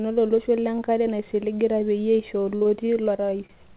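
Right after "peyie eisho", from 2.56 to 3.51 s, repeated packet loss breaks up the speech: short gaps, none longer than 49 ms, are patched by stretching the previous sound, giving a choppy, robotic texture. Unlike a single dropout, the holes keep recurring across the stretch.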